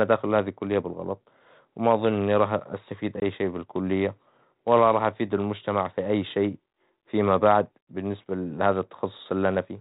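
Packet loss on an ADPCM call hits this speech at 3.20 to 3.23 s: a hard-edged hole of about 20 ms, roughly one packet, fills with silence. The decoder's predictor and step size then lag the sender's, so the returning speech comes back slightly distorted before settling.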